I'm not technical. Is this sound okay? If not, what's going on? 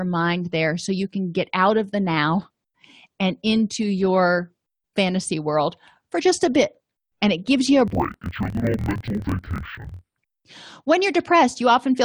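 No. Interleaved audio read as planar, 7.9 to 10.2 s: each 24 ms chunk is unpacked wrongly, so the speech drops an octave, doubled and choppy.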